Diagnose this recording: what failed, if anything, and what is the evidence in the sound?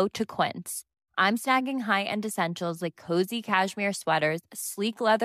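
Nothing failed; no stage shows any audible fault here.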